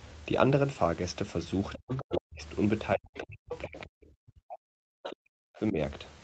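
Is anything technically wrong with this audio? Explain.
Yes. Between 1.72 and 2.21 s, 3.49 and 3.86 s, and 5.03 and 5.16 s, a second, fainter voice sits under the speech, about 10 dB below it in the first two stretches and about 15 dB below in the last. This is the other side's voice leaking through. The likely cause is that the far end played on the talker's loudspeaker and reached the microphone, and the echo canceller let part of it survive.

Overlapping those moments, the speech itself sinks and breaks up, from 1.78 to 2.42 s for about half a second in all, and from 2.95 to 5.77 s for around two seconds in total, dropping by as much as roughly 40 dB. This is speech suppressed in double talk. With both sides talking at once, the canceller likely could not separate the wanted talker from the echo and turned everything down, so the voice gets swallowed in pieces. The audio's 8 kHz top end comes from the Opus call path, which works as expected.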